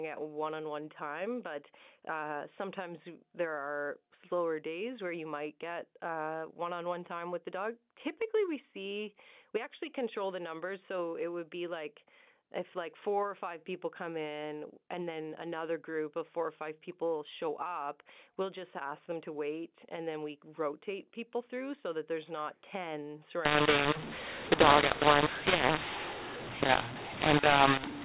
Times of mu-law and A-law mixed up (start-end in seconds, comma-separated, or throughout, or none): 23.45-28.05